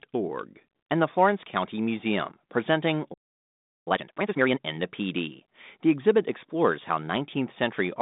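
A playback stall runs from 3.13 to 3.88 s: the speech cuts out mid-flow and the output sits silent for about 0.73 s. The player likely ran short of data or had its thread blocked, and the audio resumes only once it recovers.

Time-compressed catch-up follows from 3.88 to 4.60 s, as the player works off its backlog by dropping and cross-fading small slices. The speech plays at about twice its normal rate with its pitch unchanged, giving a hurried delivery over the G.726 telephone band, which carries nothing above 3.8 kHz.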